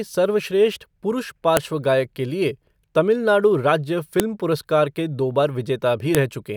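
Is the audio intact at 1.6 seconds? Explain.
No. At about 1.57 s, just after "सर्वश्रेष्ठ पुरुष", there is a sharp, loud click lasting about a millisecond: a file header played as audio. Two WAV pieces were joined without stripping the second one's header, so its few dozen bytes of metadata are read as sample values. Unlike a clipping crackle or a dropout gap, it is a single snap at the join, unrelated to the speech level around it.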